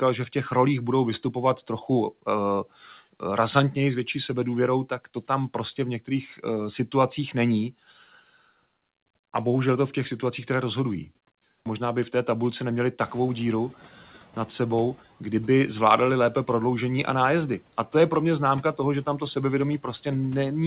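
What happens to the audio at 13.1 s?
Just after "v té tabulce neměli", the room noise jumps by about 21 dB and the noise suppressor is caught up short. From 13.0 to 13.21 s the noise passes through with less reduction at first, then sinks by about 6 dB over 210 ms as the estimate catches up. It is a single smooth settling after the rise, not repeated pumping.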